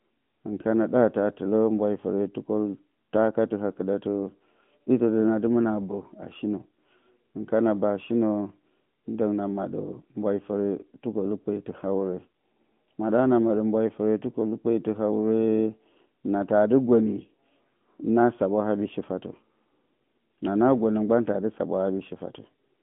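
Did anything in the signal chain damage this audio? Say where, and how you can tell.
Yes. Throughout, the speech sounds buzzy and boxed into 150 Hz to 3.4 kHz: the AMR narrowband mobile codec, resynthesising the voice from a vocal-tract model, apparently near 10 kbps.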